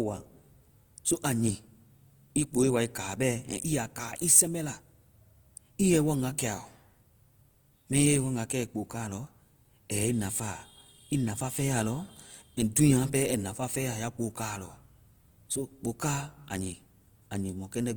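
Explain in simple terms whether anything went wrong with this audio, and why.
The speech carries a rough, grainy texture from the first second to the last, and comes across plainly noisy rather than smooth. This is likely Opus compression working in its music-oriented mode with too little data to spare. When detail runs short, it fills gaps with borrowed or synthetic noise instead of leaving silence, so the full treble range stays present but sounds coarse and sandy.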